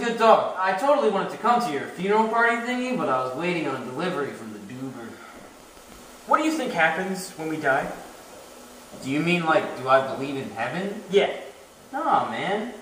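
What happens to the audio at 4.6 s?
Nothing goes wrong at 4.6 s; the audio plays through that moment intact, with no dropout, click or other fault.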